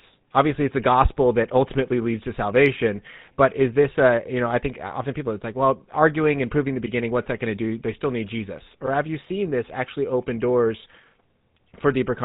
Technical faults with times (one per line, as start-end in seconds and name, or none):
0.00-12.25 GSM full-rate codec